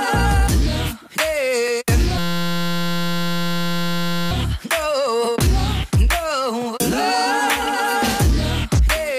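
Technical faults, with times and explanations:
2.18–4.31 s: system hang loop. The system froze while the sound hardware kept replaying one 5.8 ms slice of its ring buffer, which fits a 256-sample buffer, hundreds of times over, giving a steady 172 Hz buzz. The spectrogram shows flat harmonic lines at multiples of 172 Hz, and the waveform repeats one identical cycle.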